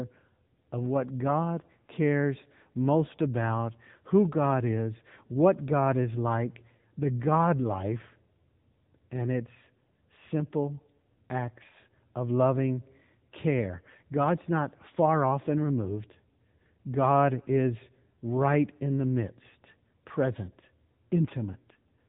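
Throughout, the speech carries AMR narrowband mobile codec damage. Nothing above 3.8 kHz survives. A buzzy, synthetic edge points to a low bitrate near 8 kbit/s.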